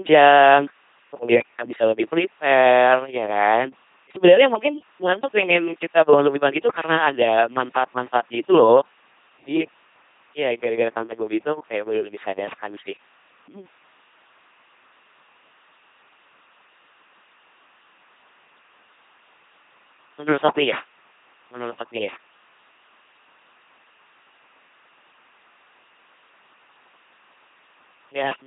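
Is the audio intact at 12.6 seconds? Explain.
No. At 12.6 seconds the speech is coming through an LPC-10 vocoder, and that fault runs through the whole clip. Each instant is modelled as either a pulse-driven buzz or a noise-driven hiss, shaped by a simple vocal tract filter. The result is a heavily damaged, buzzing, robotic voice. Wrong voicing choices swap buzz and hiss. Nothing is heard above 3.7 kHz. The coarse sound points to a rate near 2.4 kbit/s.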